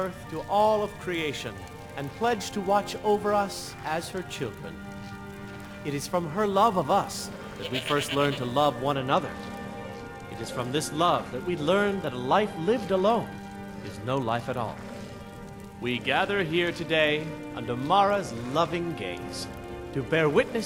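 From the start to 8.95 s the audio carries a crude rate conversion: a gritty, inharmonic fizz riding on loud and high-pitched moments. It fits samples being repeated to stretch 44.1 kHz to 48 kHz without filtering. The error sits roughly 25 dB below the signal. Unlike harmonic distortion, these added tones bear no musical relation to the sound.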